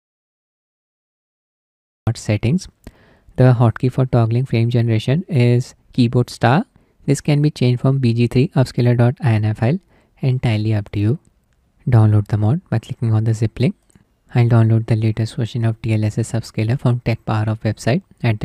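From the start to 2.07 s there is an audio dropout to silence: pure silence with no room tone, likely a lost input, before sound cuts in mid-flow.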